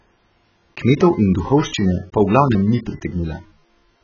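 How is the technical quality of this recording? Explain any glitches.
Poor, because heavy codec damage runs through the whole recording. The speech sounds dull and smeared, with fizzy sibilants. On a spectrogram, nothing appears above 6.8 kHz. The likely cause is AAC compression, consistent with AAC-LC at a very low bitrate around 12 kbps.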